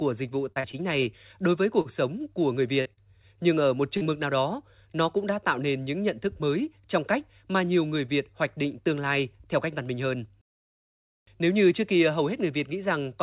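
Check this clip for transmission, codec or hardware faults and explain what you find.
The clip has two kinds of transmission fault, packet loss concealment and jitter-buffer stalls, with nothing heard above 4 kHz, which fits a narrowband G.711 mu-law call path.

Short concealed packet loss occurs at 0.52, 0.60, 2.81, 2.93 and 3.97 s. About 40 ms of speech missed the decoder each time, and the receiver patched the gap by extending the preceding sound before fading back in. Each event is a brief smear or wobble, and a short consonant may drop out.

Short stalls from a late packet occur at 0.72 s and 1.81 s. The jitter buffer ran dry while waiting for a packet, so the last sound was stretched by about 18 ms and then 38 ms before playback resumed where it left off. Nothing is lost, but a sound hangs slightly too long with a faint buzz.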